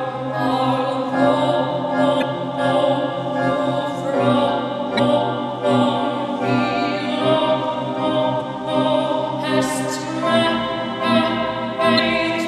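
Four brief bursts of damaged data in a compressed stream occur at 2.18 to 2.23 s, 4.95 to 5.00 s, 8.37 to 8.42 s and 11.95 to 12.00 s. Each lasts about 44 ms. Bytes in the encoded stream were corrupted there. The decoder misreads those frames, loses sync and hunts for the next valid frame header. Each event sounds like a short chirp or blip cutting across the sound, then normal playback resumes.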